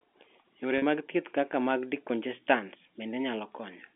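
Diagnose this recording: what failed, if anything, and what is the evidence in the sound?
The fault is in the network: packet loss with pitch repetition. At 0.78 s, the speech holds for 40 ms as a slightly buzzy, repeated tone. That fits two lost 20 ms packets. The receiver looped the last pitch period, then cross-faded into "mag thieth kaka mag".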